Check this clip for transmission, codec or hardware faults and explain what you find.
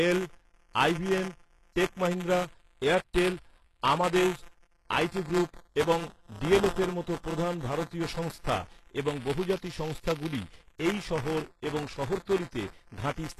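Two faults run through the whole speech clip.

Buffer tearing lasts throughout. A steady buzz sits at 172 Hz, which fits a 256-sample buffer. Writer and reader have crossed. So a small slice of each period replays audio about 20 ms old, with hard joins.

The codec damage is plainly audible throughout, likely from HE-AAC at about 16 kbps. Nothing reaches above 12.3 kHz. The treble is rebuilt from lower bands, so s sounds turn gritty and metallic.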